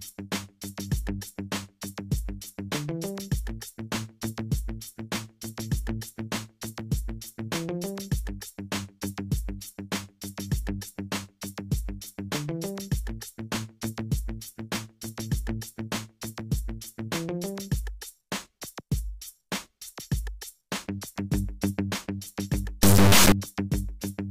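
From 22.83 to 23.32 s, integer samples were read as float: data stored as 32-bit integers was interpreted as 32-bit floating-point values. Reading the raw bit patterns that way yields numbers with no sensible relation to the original waveform, mostly near zero or wildly outside the normal range. For this half-second the sound is replaced by an extremely loud, buzzing, square-wave-like noise.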